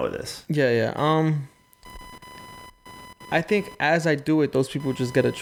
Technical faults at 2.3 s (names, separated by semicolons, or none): computer activity noise